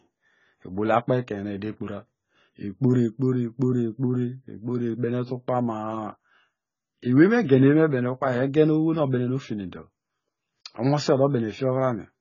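Speech with heavy codec damage throughout. Nothing is heard above 7 kHz, so the sound is dull. Sibilants turn fizzy and sustained sounds warble. The likely cause is AAC compression, AAC-LC at a bitrate that points to roughly 16 kbps.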